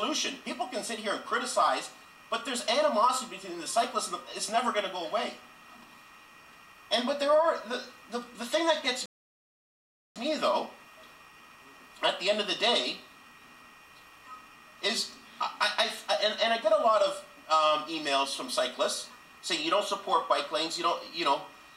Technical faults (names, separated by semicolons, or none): rebuffering stall